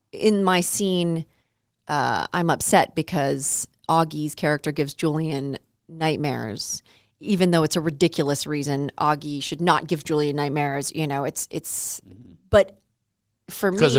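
No technical faults are audible.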